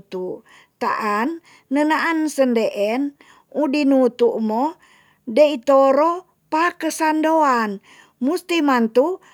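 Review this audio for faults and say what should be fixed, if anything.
Nothing here needs fixing; I listened all the way through and didn't catch a single technical problem in the recording.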